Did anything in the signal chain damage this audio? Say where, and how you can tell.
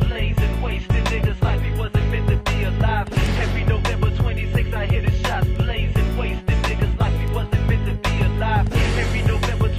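Yes. Four isolated sharp ticks land at 3.26, 4.54, 5.56 and 7.28 s, broadband and unrelated to the surrounding sound, peaking from about -27 to about -9 dBFS. These are bit error spikes: a flipped bit in memory or on a digital link momentarily throws one to three samples off by a power of two.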